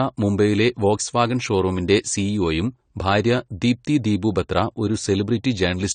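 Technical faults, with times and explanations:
Throughout, AAC compression: the speech has likely passed through an AAC-LC encoder starved of bits, fitting roughly 32 kbps, which drops the top band and quantises the rest coarsely. Nothing survives above 9 kHz, so the sound is dulled, with plainly audible smearing.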